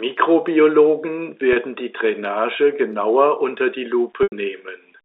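Two dropouts where packet loss with pitch repetition patched the gap: at 1.53 to 1.56 s, about 30 ms, one packet's worth, heard as a brief buzzy hold; then 4.23 to 4.32 s, about 90 ms, where the repeated pitch period fades toward silence before a quick cross-fade back.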